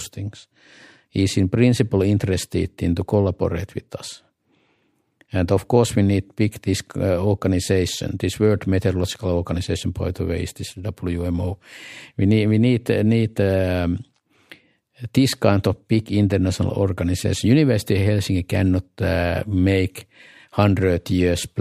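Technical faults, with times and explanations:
No technical faults can be heard in this speech recording. There is nothing to place at any time in the audio.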